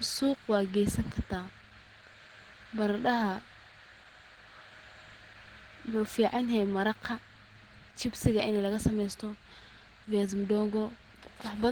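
Speech with plainly audible Opus compression throughout: a hoarse, grainy texture rather than MP3-style swirling, with full bandwidth to 20.2 kHz, likely Opus hybrid mode, consistent with about 16 kbps.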